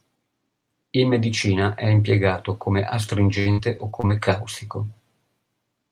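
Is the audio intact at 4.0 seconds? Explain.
No. From 3.29 to 4.11 s, just after "medicina è impiegato come", there is repeated packet loss (robotic sound). Six dropouts, the longest 60 ms, are each bridged by extending the preceding sound. About a quarter of the stretch is synthetic fill, giving choppy speech with pieces missing.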